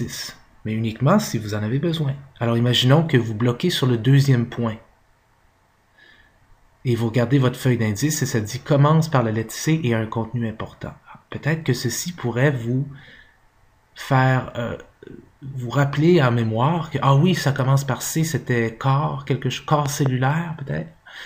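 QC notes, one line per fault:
19.86–20.08 s, loud pop: two sharp pops in quick succession, peaking about 10 dB above the surrounding level, while the audio continues underneath without interruption. The cause is likely a sudden voltage step or pulse entering the chain, such as a plug being seated, a switch operating, a static discharge or a driver glitch. The downstream circuitry shapes each pulse into a brief, hard transient, which is what gives the event its percussive, thump-like character.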